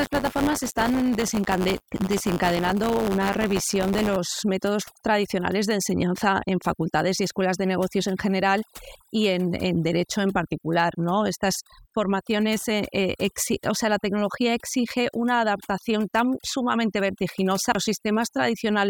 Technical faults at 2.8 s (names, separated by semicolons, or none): overdone noise removal; buffer tearing